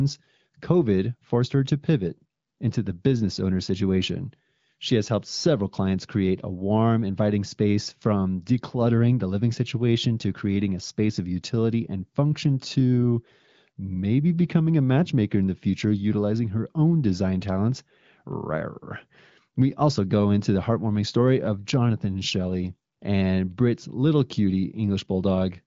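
No technical faults are audible.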